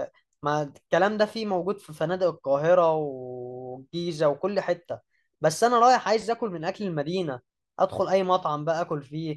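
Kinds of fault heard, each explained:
No technical faults can be heard in the speech recording, and the signal stays continuous and intact throughout.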